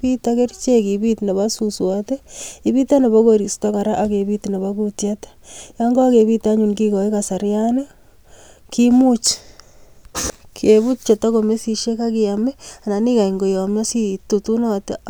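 Nothing here needs flagging: the speech runs along without a single glitch, gap or odd noise to point at.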